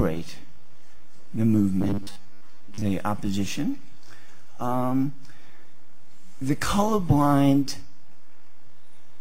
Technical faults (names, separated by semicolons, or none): robotic sound from repeated short buffers